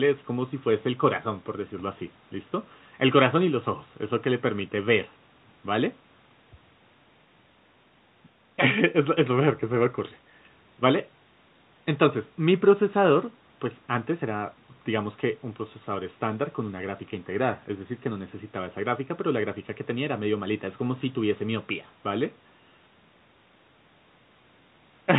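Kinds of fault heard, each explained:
No faults detected: the speech carries the normal narrowband character of G.711 mu-law telephone coding, with nothing above 4 kHz and the lowest bass trimmed by the call's microphone processing.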